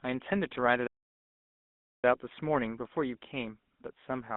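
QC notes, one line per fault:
throughout: GSM full-rate codec. The speech has a buzzy, gravelly roughness. The coder models the vocal tract and excites it with sparse, regularly spaced pulses. That coarse excitation replaces the natural fine detail of the voice. The band runs from about 200 Hz to 3.6 kHz, so there is no air or sibilant sparkle. The damage is plainly audible. The character fits a 13 kbps GSM full-rate coder on a phone line.
0.87–2.04 s: playback stall. The speech stops mid-flow and the output goes silent for about 1.17 s. It then resumes. The output simply drops out and comes back. A silence this long and abrupt is likely a player that ran out of buffered data or had its audio thread blocked, with nothing to send until it recovered.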